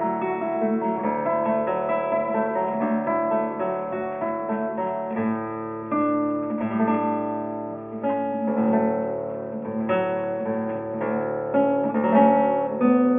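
No technical faults can be heard anywhere in this recording.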